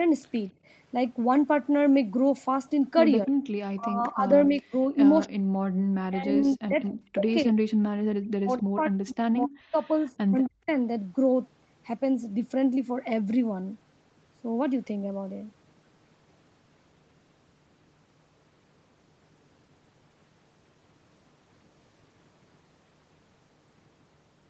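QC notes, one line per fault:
0.53–0.64 s, background gated by the echo canceller: the echo canceller clamped the microphone while the loudspeaker was active, pulling the room sound down by about 11 dB for roughly a tenth of a second. The background briefly sinks, then recovers once the canceller releases.
3.26–10.69 s, speech suppressed in double talk: with both sides talking, the canceller likely could not separate the near talker from loudspeaker echo and attenuated everything. The speech dips, dulls and drops out in pieces, by roughly 40 dB at worst, about four seconds in total.
10.44–10.71 s, echo leak: the far end's canceller likely let part of its loudspeaker pickup through, so a copy of the speech returns 257 ms late. It sits far below the direct speech, around 35 dB down, as a faint trailing scrap.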